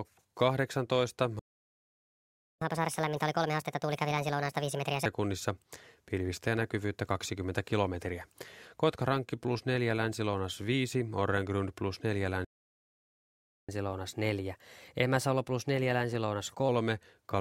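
At 1.39 s the speech stops dead. Silence holds until 2.62 s, about 1.2 s. This is a playback stall. The player likely ran out of data or had its thread blocked. The speech then resumes where it broke off.

From 2.62 to 5.05 s comes catch-up at higher speed. The player resamples its backlog at 1.5 times normal rate. Speech sounds rushed and lifts in pitch by roughly seven semitones, then drops back to normal.

A second playback stall runs from 12.45 to 13.69 s, again about 1.2 s of silence. The likely cause is the same starved or blocked player.

Catch-up follows from 13.69 to 16.69 s, this time at 1.1 times speed. The rise is milder, about a semitone and a half, before settling.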